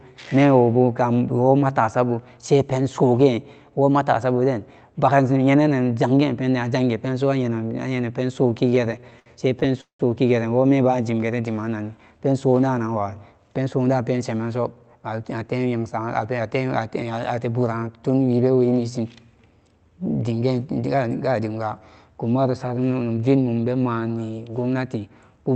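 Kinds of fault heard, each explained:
Repeated stalls (stutter): Packets kept arriving late, so the jitter buffer ran dry 15 times between 8.53 and 10.01 s. The receiver stretched the last sound to fill 380 ms, about a quarter of that span, with the longest fill 185 ms. Nothing is lost, but the speech drags and stutters.
Jitter buffer speed-up: The buffer held more audio than it aimed for, so the receiver trimmed short pitch-period pieces to catch up. The speech runs faster at unchanged pitch, about 108% from 13.10 to 13.67 s and 111% from 20.87 to 21.57 s.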